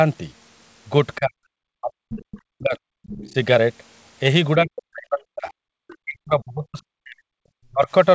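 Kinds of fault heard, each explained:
Speech suppressed in double talk: the talker's voice keeps sinking hard, by about 40 dB at worst, in stretches around 1.2, 1.8 to 3.4, 4.6 to 5.5, 6.0 to 7.3 and 7.7 s, likely the echo canceller getting confused by both sides talking and ducking everything.
Other side's voice leaking through: a second voice creeps in underneath at 2.13 to 2.39 s and 2.76 to 3.33 s, about 20 dB below the talker, plus a fainter scrap near 5.9 s, likely loudspeaker playback the echo canceller didn't fully scrub out.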